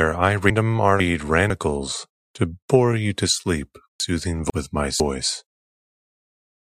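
Chunks out of order at 0.5 to 1.5 s and again at 4.0 to 5.0 s: each time a 500 ms block of speech plays one chunk late, swapping places with the block after it. The swapped speech sounds jumbled, with hard joins.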